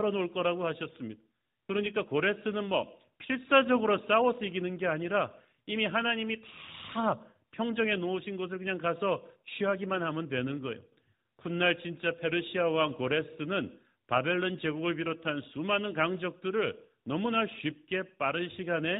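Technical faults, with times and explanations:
No technical faults detected; the speech carries the expected sub-4 kHz bandwidth of the AMR narrowband mobile codec at 12.2 kbps, with only light coding character.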